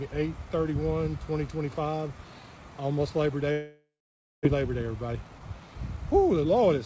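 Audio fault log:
3.52–4.47 s, long network dropout: Incoming audio likely stopped arriving, and about 600 ms was never played. The receiver stretched the last sound into a fading buzz, leaving about 540 ms of near silence. The sound resumes later, with the lost section gone.
4.54–6.85 s, jitter buffer speed-up: Delayed audio arrived in a bunch, so the buffer held around 300 ms more than its target. It trimmed short pitch-period pieces repeatedly, and the sound plays at 113% speed with unchanged pitch, feeling hurried.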